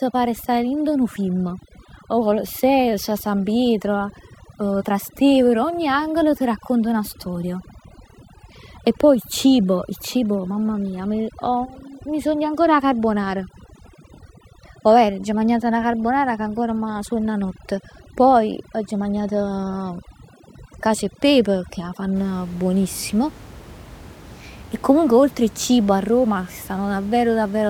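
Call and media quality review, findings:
Overdone noise removal, 0.0 to 22.16 s. Symptom: background dropped, breaking up into twinkling specks. Component: noise suppressor, threshold set too aggressive. Mechanism: individual frequency bands near the noise estimate are gated down or out, taking low-level speech detail with them. Room noise, about 21 dB below speech, is what the suppressor is chasing. Action: reduce suppression depth or raise the noise-floor margin.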